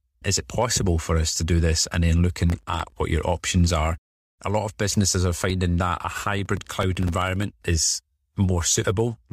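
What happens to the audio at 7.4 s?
At 7.4 s you're hearing the tail of a processor overload crackle running from 6.18 to 7.43 s. The processor keeps missing its deadlines for tiny buffers of around a millisecond and a half. Each miss drops a sliver of silence, and dozens of them stack into gritty crackle over the speech.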